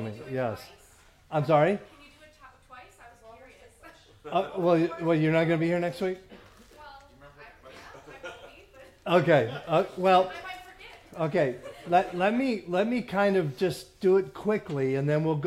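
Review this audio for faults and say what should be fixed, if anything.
No faults were found in this audio, so nothing needs to be fixed.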